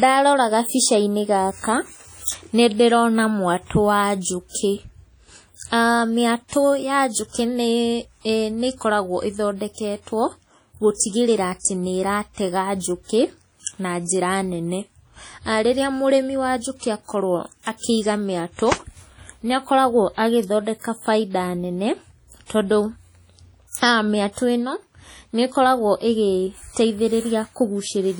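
Right from the start the speech has a ringing, washy quality, with a hiss that swells and fades along with the talking. That points to heavy WMA compression, likely an early WMA encoder at a low bitrate around 32 kbps, smearing quantisation noise across each long transform block.

At 11.59 s there's a pre-echo. A short burst of hiss arrives about 56 ms before a sharp onset, which comes out softened and smeared. The codec spread noise meant for the loud attack over the quiet stretch just ahead of it in the same block.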